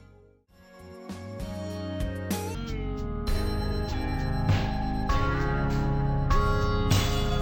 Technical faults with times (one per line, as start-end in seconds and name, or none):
2.55-7.41 stereo read as mono